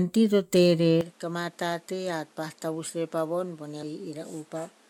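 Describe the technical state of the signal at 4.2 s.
At 4.2 s you're on a likely input switch to a poorer device, in effect from 1.01 s to the end: nothing above 13 kHz, level down about 10 dB, fresh noise underneath.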